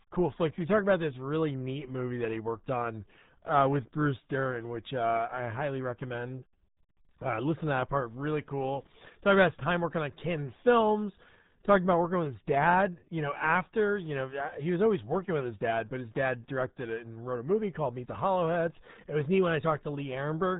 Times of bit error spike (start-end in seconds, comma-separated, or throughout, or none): none